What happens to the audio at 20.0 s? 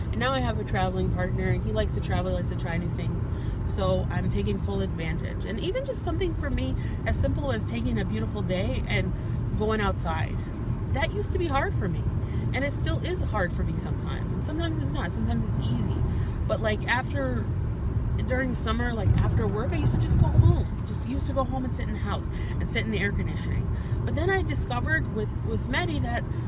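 Nothing goes wrong at 20.0 s; the audio plays through that moment intact, with no dropout, click or distortion.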